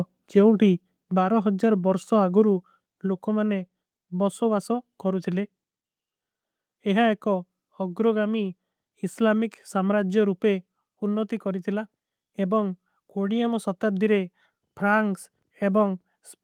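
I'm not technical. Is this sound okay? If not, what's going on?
No, not quite. At about 1.02 seconds the whole recording suddenly gets quieter in one step, and that covers the speech and the background noise behind it. It's a microphone volume stepped down: the call software likely decided the mic was running too hot and turned its input level down on its own. After that point everything simply sits at a noticeably lower volume.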